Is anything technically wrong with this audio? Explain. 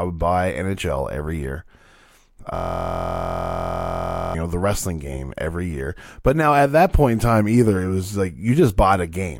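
Yes. From 2.55 s to 4.35 s there is a system hang loop. The playback system stalled while the audio hardware kept replaying the same small piece of its buffer. A segment about 23.22 ms long repeats exactly, dozens of times, which fits a 1024-sample buffer. Because the loop is so short, it sounds like a steady buzz at about 43.1 Hz rather than a stutter. On a waveform, that stretch shows identical cycles repeating. On a spectrogram, it appears as a frozen band of evenly spaced harmonics 43.1 Hz apart.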